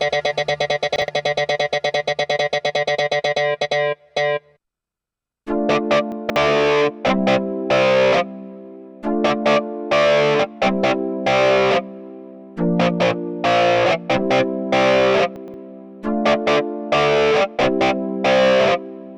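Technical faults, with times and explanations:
0.96–1.08 s, 6.12–6.36 s and 15.36–15.54 s, chunks out of order: a 60 ms chunk plays one, three, then two chunk-lengths late, giving a jumbled blip; the waveform and spectrogram show abrupt discontinuities at each splice.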